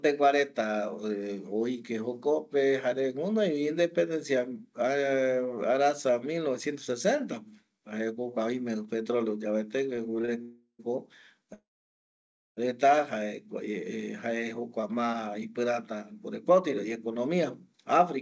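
Short stalls from a late packet come at 9.96 s, 10.22 s and 10.25 s. Each time a packet was late, the jitter buffer ran dry, and the receiver held the last sound for 17, 17 and then 25 ms. Nothing is lost, which sets these apart from dropouts.

Call audio freezes follow, from 10.42 to 10.81 s and from 11.54 to 12.59 s. The sound hangs and fades, reaching silence for 70 ms in the first and 940 ms in the second. The likely cause is packets held up in transit. When the audio resumes it picks up where it stopped, so the freezes insert gaps into the speech rather than removing any of it. They are much longer than the stalls.

A jitter buffer speed-up runs from 16.11 s, just after "jokua ma ipirata", to 18.17 s. The receiver trimmed short pitch-period pieces, about a tenth of a second in all, to cut the delay. The speech plays at 105% speed with unchanged pitch, so it sounds slightly hurried rather than higher. 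Throughout, the G.722 call path leaves nothing above 8 kHz.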